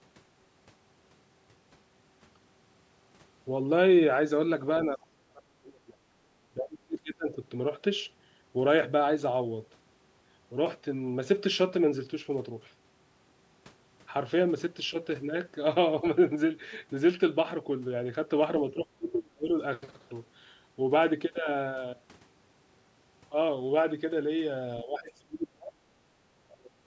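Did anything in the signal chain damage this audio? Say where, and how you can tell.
Yes. The speech abruptly sinks and returns in broken pieces at 4.87–6.0 s, 6.5–7.36 s, 18.71–19.51 s, 24.83–25.75 s and from 26.4 s to the end, falling by roughly 25 to 35 dB at its deepest. This points to the call-processing stage, most likely speech suppressed in double talk. With both ends talking at once, the echo canceller could not separate the near talker from loudspeaker echo, so it turned everything down together.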